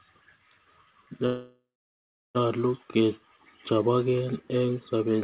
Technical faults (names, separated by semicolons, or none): call audio freeze